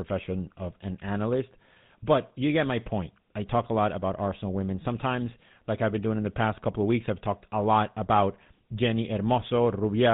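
GSM full-rate codec damage runs through the whole speech clip. The codec models the vocal tract and excites it with regularly spaced pulses, keeping only every third excitation sample, which fits the 13 kbps full-rate mode. Nothing above 4 kHz survives, and a buzzy, gravelly roughness is plainly audible.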